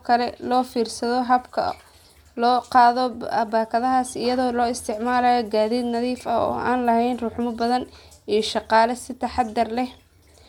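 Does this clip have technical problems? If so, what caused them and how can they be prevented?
No, there are no technical problems to report here.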